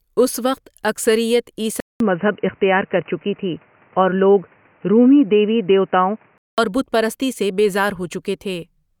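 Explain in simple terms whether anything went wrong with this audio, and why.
At 1.80 s the speech drops out briefly, then sounds dull and boxy until 6.58 s. The likely cause is the input switched to a poorer device.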